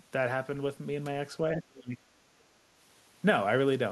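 From 1.57 to 2.0 s, the speech drops sharply. Its level falls by roughly 25 dB at the deepest point, and the dip lasts about 0.4 s before the level recovers. This is speech suppressed in double talk. The likely cause is both ends talking at once. The echo canceller could not tell this talker from the returning loudspeaker echo, so it turned the whole signal down. The result sounds like the talker briefly ducking away.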